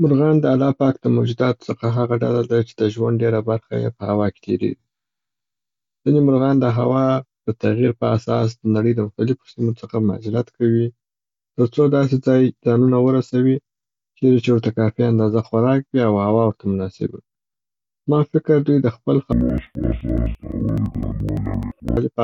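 Interleaved audio read as planar affects this speech recording from 19.3 s to 22.0 s. Each block of alternating left and right samples is split into halves played side by side at half speed, so the voice drops an octave, sounds doubled and chops at about 11.7 Hz, which fits a 4096-sample block.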